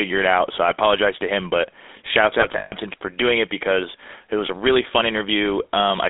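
Throughout, the speech carries the gravelly, buzzy roughness of the GSM full-rate codec, which fits a 13 kbps rate. The vocal tract is modelled and driven by sparse, regular pulses. On a spectrogram, energy sits between 250 Hz and 3.7 kHz, with smeared, coarse harmonics.

From 2.40 to 2.74 s come lost GSM frames: 180 ms missing, scattered over 320 ms, the longest run about 150 ms. The decoder repeats the last good frame, giving a metallic ring. The waveform shows repetitive stretches.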